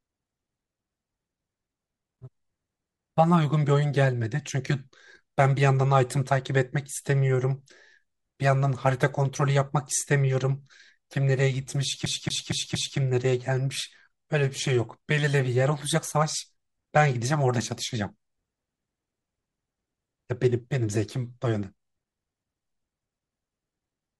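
At 12.06 s the speech hits a CD stuck on one turn, a 0.23 s slice repeating four times with brief mutes until 12.98 s, classic skipping-disc stutter.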